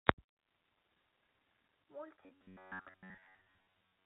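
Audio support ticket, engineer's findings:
Robotic sound from repeated short buffers, 2.24 s to end: the speech turns into a rigid metallic buzz near 94 Hz, likely from ~10.7 ms blocks being replayed. Spectrogram shows fixed harmonic comb lines.

Packet loss with last packet repeated, 3.24–3.26 s: one 20 ms packet replayed, small blip. Waveform shows a duplicated segment.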